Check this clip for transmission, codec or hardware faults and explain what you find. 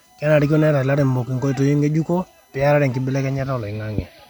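One hardware fault is present: USB whine, throughout the speech. Current drawn in the bus's 1 ms frames leaks in through power or ground, producing a fixed-pitch whine at 1 kHz and its multiples, strongest at 18 kHz, roughly 40 dB below the speech. On a spectrogram it appears as steady horizontal lines spaced 1 kHz apart across the whole clip.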